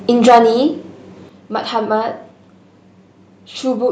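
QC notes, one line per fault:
0.27–0.39 s, microphone overload: for about 0.12 s the loudest syllable turns harsh and crackly. Around 15 percent of samples sit flattened against the converter ceiling, likely from input gain about 6 dB too hot. The waveform shows squared-off peaks, and the spectrogram shows broadband vertical smearing.
0.29 s and 1.29 s, microphone volume stepped down: voice and background drop together, first by about 3 dB and then by about 6 dB, likely the call software reacting to a too-loud microphone. At each point the waveform envelope shrinks abruptly, and the spectrogram dims evenly across all frequencies.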